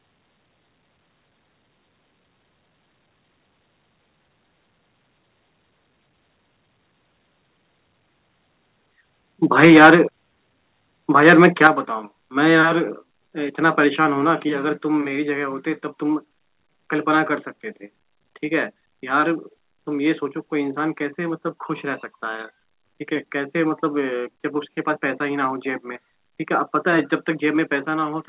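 Microphone overload from 9.59 to 9.95 s puts a harsh, crackling edge on the loudest peaks, which are flattened because the input likely drove the converter about 7 dB past its limit, with roughly a tenth of samples clipped. At 9.65 s the microphone volume steps down by about 3 dB, a sudden drop in the sound and background, likely the call software reducing input gain in response. A second overload from 11.26 to 11.67 s is milder, about 4 dB over with a few percent of samples clipped. It is followed at 11.67 s by a larger step of about 7 dB and at 12.69 s by another of about 2 dB. Through the narrowband call path, nothing is heard above 4 kHz.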